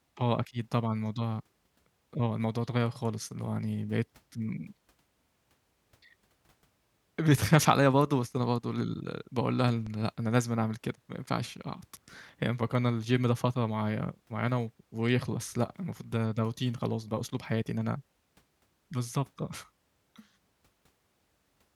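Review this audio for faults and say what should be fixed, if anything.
A loud pop, two sharp pulses in quick succession between 9.68 and 9.90 s, stands a few decibels above the speech. This is likely a voltage step from a plug, switch or static discharge that the downstream circuitry shaped into thumps. Unlike a dropout, the speech carries on underneath. Secure connections and ground the equipment before recording to prevent it.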